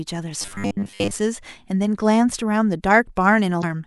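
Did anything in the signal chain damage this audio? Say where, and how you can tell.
Yes, in two places. From 0.42 to 1.12 s the speech turns rigid and metallic. A steady 100 Hz buzz sits over it while the words still roughly come through. This is robotic sound from repeated short buffers, and the stage is likely the driver or buffer. New audio arrived too slowly. The software filled the gaps by looping the last chunk, which fits a 10 ms buffer. Roughly 70 percent of that stretch is repeated audio, not fresh signal.

At 3.59 to 3.64 s there is a brief blip about 40 ms long. This is damaged data in a compressed stream, at the codec or storage stage. Some bytes in the encoded file were wrong. The decoder misread those frames and lost sync. It then hunted for the next valid frame header. That disruption produces the short, unnatural burst instead of clean decoded speech.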